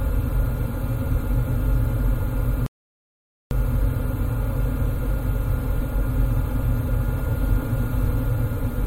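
At 2.66 s the audio just drops out and stays silent until 3.51 s, roughly 0.85 s of nothing, before picking back up. That's a playback stall, most likely the player running dry of buffered data or its thread getting held up.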